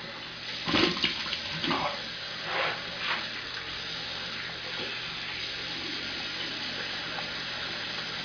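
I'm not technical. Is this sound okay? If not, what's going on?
Yes, this one is fine. Nothing in it points to a technical problem, so there's nothing you need to fix.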